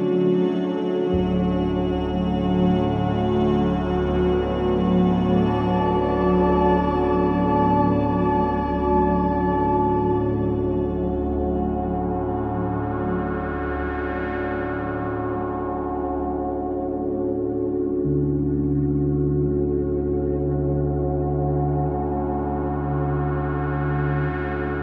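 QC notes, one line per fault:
No faults heard.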